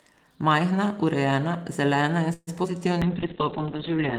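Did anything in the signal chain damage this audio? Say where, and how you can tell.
Yes, all four faults sit in the call path, between the network, the jitter buffer and the codec.

At 2.33 to 2.49 s there is a call audio freeze. The last sound is stretched into a fading buzz for about 137 ms, ending in roughly 30 ms of silence. Speech then resumes exactly where it stopped, so the cause is likely late packets draining the jitter buffer. Nothing is lost, which separates it from a skip.

A skip ahead follows at 2.63 to 2.66 s. About 70 ms of speech vanishes and the two sides are spliced almost seamlessly, with only a few milliseconds of fill. Unlike the freeze, nothing is stretched. The jump cuts about 50 ms of delay.

From 2.72 to 2.98 s, a jitter buffer slow-down plays the speech at 88% speed while the pitch stays put. Repeated pitch periods add about 40 ms and draw the sounds out. A resampling fault would have shifted the pitch as well.

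A call bitrate drop starts at 3.02 s and lasts to the end. The codec falls from 32 to 6 kbps and its bandwidth shrinks from 20 kHz to 4 kHz. The result is muffled, watery speech with no gaps or timing changes. That steady coarseness marks it as an encoder fault rather than packet loss.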